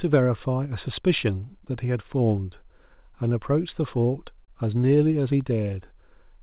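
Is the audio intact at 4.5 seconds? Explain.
No. From 4.45 to 4.50 s there is a short stall from a late packet. A packet arrived after it was due, the jitter buffer ran dry, and the receiver filled about 31 ms by stretching the last sound, heard as a briefly held moment with a slight buzz or dip. Unlike a lost-packet dropout, nothing is skipped: the speech resumes exactly where it paused, just 31 ms later, through the G.711 call path's 4 kHz-limited band.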